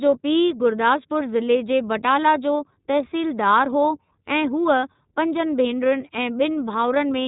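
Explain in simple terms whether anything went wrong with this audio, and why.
Something did go wrong: the whole recording, from start to finish, has passed through the iLBC codec, a phone-quality speech compressor used for internet calls. It chops the speech into 30 ms slices and codes each one separately, keeping nothing above 4 kHz. That is why the speech sounds muffled and thin, with a clearly audible rough, slightly artificial texture throughout, rather than the crisp, full sound of the original recording.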